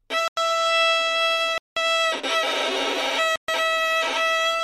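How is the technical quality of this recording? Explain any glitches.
The recording is marred by three dropouts, each a block of digital silence.

Block of digital silence at 0.28–0.37 s, 1.58–1.77 s and 3.36–3.48 s: most likely the output buffer went unfilled in time, so samples were zeroed. Gaps of about 93, 186 and 125 ms, the first two fitting 4096- and 8192-sample blocks, cut abruptly to silence.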